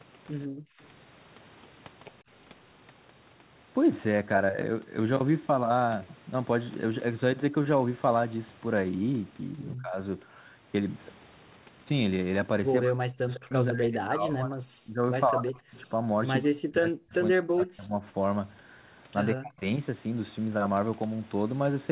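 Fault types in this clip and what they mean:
Background gated by the echo canceller: While the far-end loudspeaker was active, the echo canceller clamped the microphone path down hard. From 0.47 to 0.79 s the room sound behind the speech falls away by as much as about 40 dB, a gap of around a third of a second, and the ambience then returns once the canceller releases. It sounds like a brief hole of near-silence in the background.
Speech suppressed in double talk: This is likely caused by both ends talking at once, leaving the echo canceller unable to tell the near talker from loudspeaker echo, so it attenuated everything. The speech dips by roughly 20 dB at 9.81 to 9.97 s. It then drops by up to around 40 dB from 12.83 to 16.05 s (some three seconds), 16.42 to 18.0 s and 19.34 to 19.62 s.
Echo leak: This is likely caused by the far end playing the call on a loudspeaker, where its echo canceller failed to remove everything its microphone picked up and sent part of it back. 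At 13.35 to 13.39 s a short scrap of the speech returns 141 ms late, roughly 15 dB below the direct level. It is a faint repeat that lands inside the suppressed double-talk stretch, band-limited like the rest of the call audio to below 4 kHz.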